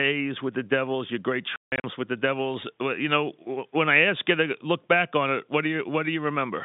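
At 1.56 to 1.84 s, between "your great" and "with the", packet loss filled with silence cuts about 220 ms out of a 280 ms stretch of speech, the longest gap 160 ms. The holes are hard-edged, and their spacing suggests 20 ms packets, over the 3.7 kHz-limited telephone band.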